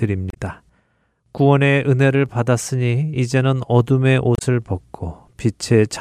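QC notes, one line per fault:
0.30–0.37 s and 4.35–4.42 s: damaged data in a compressed stream. Both times, about 70 ms of the speech breaks into a brief chirp, squawk, click or short hole as corrupted bytes make the decoder misread those frames, lose sync and hunt for the next valid frame header.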